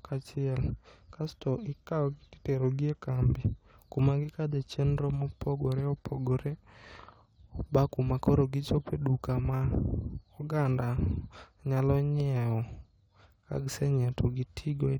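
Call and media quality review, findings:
No audible technical faults found in the speech signal; nothing to attribute to any component of the call or media path.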